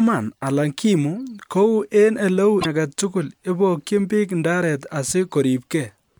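A stretch of damaged data in the compressed stream breaks this speech clip from 2.58 to 2.66 s. The decoder hits corrupted frames there, loses sync and hunts for the next valid frame header, so the passage comes out as a brief glitch.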